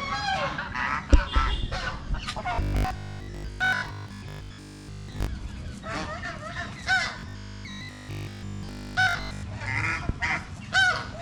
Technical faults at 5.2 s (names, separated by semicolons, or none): robotic sound from repeated short buffers